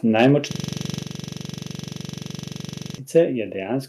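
From 0.19 to 0.31 s the loudest syllables take on a harsh, crackling edge. This is microphone overload, likely from input gain set high enough to drive peaks about 5 dB past the converter's ceiling. A few percent of samples are flattened. On the waveform the peaks show squared-off, flat tops. On the spectrogram, broadband splatter and extra harmonics rise above the speech formants during that stretch.

At 0.51 s a system hang loop begins and runs until 2.98 s. The audio engine kept replaying the same 42.67 ms block of its ring buffer, which fits a 2048-sample buffer, while the rest of the system stalled. Repeating dozens of times at 23.4 Hz, it sounds like a rough, rapid mechanical stutter rather than a smooth buzz. On the waveform one identical segment tiles end to end. On the spectrogram the image freezes into evenly spaced vertical stripes with fine comb-like harmonic lines at multiples of 23.4 Hz.

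At 1.02 s, inside the loop, the level drops abruptly by about 4 dB. This is a microphone volume stepped down, likely an automatic gain control reacting to the earlier clipping. On the waveform the envelope shrinks in a single step, and the spectrogram darkens uniformly across all frequencies.

A second, milder microphone overload follows at 3.16 to 3.19 s, likely with peaks about 1 dB past the converter's ceiling. It gives a brief grainy crackle and again flattens a few percent of samples.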